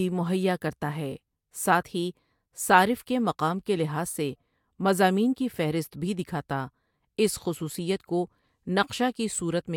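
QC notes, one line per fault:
No audible technical faults found in this speech clip.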